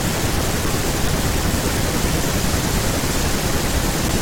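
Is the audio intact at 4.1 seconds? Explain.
Yes, at 4.1 seconds the audio is intact, with no dropout, click, distortion or other fault at that point.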